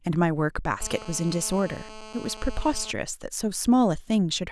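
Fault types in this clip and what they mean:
GSM phone buzz: a hard, raspy 217 Hz buzz rich in harmonics, caused by audio circuitry rectifying the transmit bursts of a nearby 2G handset. It holds steady from 0.81 to 2.92 s, as during a call, about 17 dB below the speech and unrelated to it.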